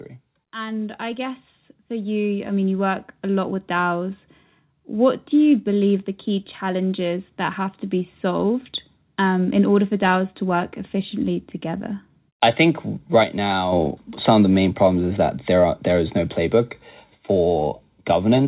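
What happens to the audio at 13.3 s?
One channel drops out, from 13.24 s to 13.72 s, just after "efficiently together I think" and ending before "some of the main". The speech level falls abruptly by about 6 dB for roughly half a second, then returns, with the tone unchanged. The likely cause is that one stereo channel was lost briefly. With both channels carrying the same sound, the mono sum keeps its character and only drops by half in amplitude.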